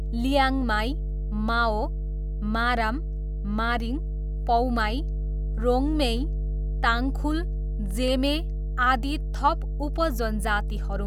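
Speech recording with a steady mains hum at 50 Hz throughout, roughly as loud as the speech itself. It comes from power-line coupling, such as a ground loop. Clock slip clicks run from 0.14 s to 11.06 s as a soft, fast rattle, a tick about every 70 ms. Each tick is one dropped or repeated sample. The likely cause is two unsynchronised clocks differing by a few hundred parts per million.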